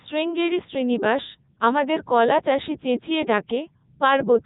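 Robotic, buzzy speech runs through the whole clip, with a synthetic quality, and nothing above 3.8 kHz. That is the Codec 2 vocoder, and the damage is heavy. Codec 2 doesn't preserve the waveform. It sends only pitch, voicing, energy and a coarse spectral envelope, and the decoder rebuilds the voice from a bank of sine waves. The result here fits its highest 3.2 kbit/s mode.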